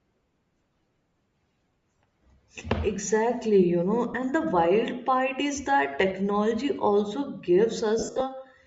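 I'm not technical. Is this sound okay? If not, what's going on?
No. Throughout the clip the speech has a breathy, grainy edge, and the high end sounds thin and hissy instead of crisp. This is likely Bluetooth LC3 compression, the audio squeezing used by newer Bluetooth LE Audio devices. To save data, it discards much of the treble detail in each short slice of sound, about 10 ms long, and fills the gap with soft noise. That produces the plainly fuzzy, artificial texture heard here.

There are also lost LE Audio frames, moments when chunks of the wireless signal never arrived. At 4.13 s a single 10 ms chunk drops out. A bigger problem comes between 7.99 s and 8.22 s, where chunks go missing on and off, the longest run lasting about 70 ms. The receiving device fills each gap by reusing the last bit of sound in scrambled form.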